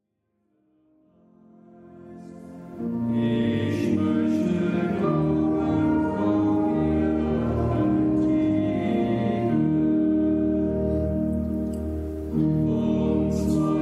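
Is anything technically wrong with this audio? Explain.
No, nothing here sounds technically wrong.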